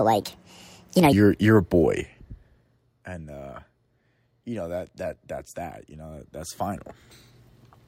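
From the start to about 1.13 s, just before "you're a", there's a section at the wrong speed, running 1.5 times too fast and sounding rushed and chipmunky, roughly seven semitones high. Likely a clock mismatch, with that stretch played back against the wrong rate.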